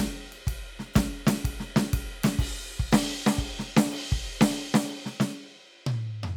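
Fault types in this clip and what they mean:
No faults of any kind are audible in this music clip.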